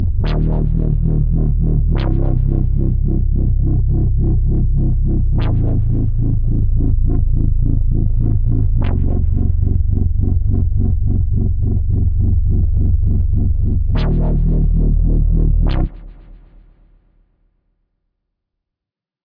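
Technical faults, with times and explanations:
No technical faults can be heard anywhere in this recording.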